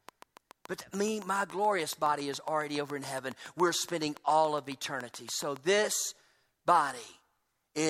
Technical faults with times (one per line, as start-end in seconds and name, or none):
0.09-5.57 train of clicks